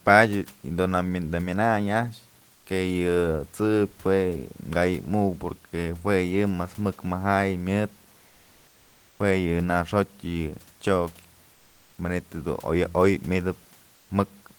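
At 2.53–2.65 s, 11.53–11.97 s and 13.95–14.09 s, comfort noise in place of the background: the room's detailed texture gives way to a steady, featureless hiss about 2 dB quieter, likely Opus DTX filling silent gaps, seen on a spectrogram as smooth, structureless bands.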